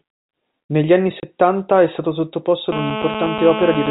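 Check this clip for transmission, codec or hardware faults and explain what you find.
Two faults are audible in this speech clip, heard through a telephone-band G.711 channel that cuts everything above 4 kHz.

Packet loss filled with silence at 1.2 to 1.23 s: a 30 ms gap, consistent with one lost packet, replaced by silence. At its hard edges the speech abruptly stops and restarts.

GSM phone buzz from 2.72 s to the end: a nearby 2G handset's radio bursts, rectified by the audio circuit, produce a steady, raspy 217 Hz buzz with many harmonics, about 6 dB under the speech. Its steadiness points to a phone in an active call.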